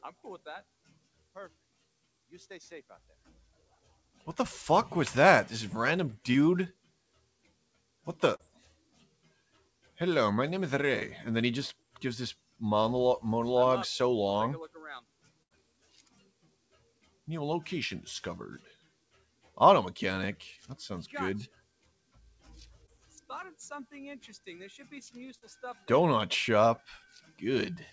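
A noise suppressor tuned for speech has been applied to this non-speech audio, and it runs for the whole clip. Because the audio passes through a G.722 call path at 64 kbps, nothing is present above 8 kHz. The suppressor treats sustained tones, ambience and reverberant tails as noise, so its gain keeps moving by around 10 dB. Transients pass while held material sinks, which gives the audio a pumping, thinned character. Specific sounds cut by the noise suppressor drop much further, by about 18 dB at the deepest, at 0.12–4.27 s, 6.72–9.98 s, 11.74–12.62 s (about 17 dB), 15.00–17.28 s, 18.59–19.60 s, 21.48–23.29 s, 24.38–25.88 s (about 15 dB) and 27.00–27.92 s. In these spans sustained or decaying content loses level and has its tails cut short, while onsets remain comparatively intact. Short concealed packet loss occurs at 6.32–6.36 s, 8.36–8.41 s, 10.99–11.03 s, 22.86–22.99 s, 25.38–25.44 s and 26.76–26.83 s. 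Each time, 20 to 40 ms of audio failed to arrive in time, and the decoder extrapolated from the preceding signal before crossfading back to the real stream. The result is a brief smear or wobble, and at 22.86 s and 26.76 s a few milliseconds of extra delay as well. A burst of packet loss at 15.43–15.52 s removes about 80 ms. Concealment stretches the last sound across the gap, fading it into a held buzz or hiss before playback resumes with that segment missing.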